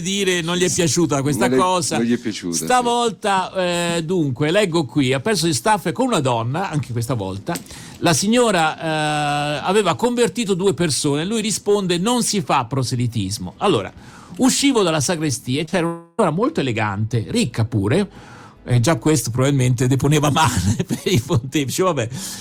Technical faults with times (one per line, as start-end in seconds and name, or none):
15.65-15.74 short concealed packet loss
15.86-16.20 long network dropout